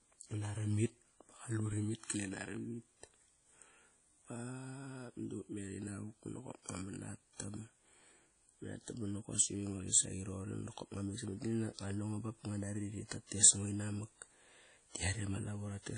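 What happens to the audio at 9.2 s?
At 9.2 s the speech is still passing through what is likely WMA compression, which affects the whole clip rather than that moment alone. The transform coder spreads quantisation noise over long blocks and drops weak spectral detail, and the damage here points to a low bitrate of around 32 kbps. The result is plainly audible: a ringing, washy smear around the speech, hiss that swells and fades with it, and nothing above 10.1 kHz.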